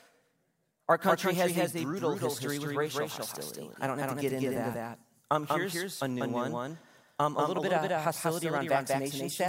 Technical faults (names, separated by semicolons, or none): doubled audio track